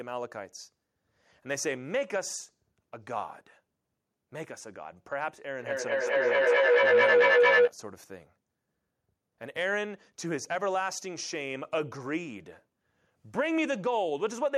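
From 5.59 to 7.76 s there's a feedback howl: two devices in the same room are closing a loop, so each pass gets louder. It narrows to a tone around 500 Hz, pulsing about every fifth of a second, and peaks about 9 dB above the speech.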